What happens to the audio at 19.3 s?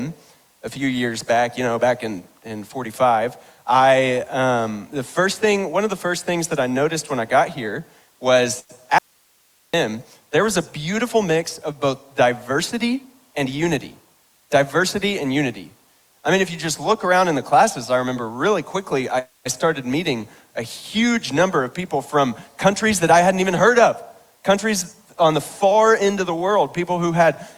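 At 19.3 s you're right in the middle of a call audio freeze running from 19.19 to 19.47 s. The last bit of sound gets stretched into a short buzzy tail that fades, then about 140 ms of near silence before things pick up exactly where they left off. Nothing's lost; the rest just arrives roughly 270 ms late. The likely cause is packets stalling in transit and the jitter buffer running dry.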